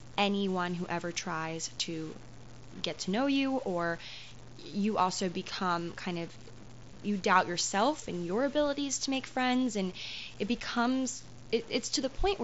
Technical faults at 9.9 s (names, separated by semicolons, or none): low bit depth without dither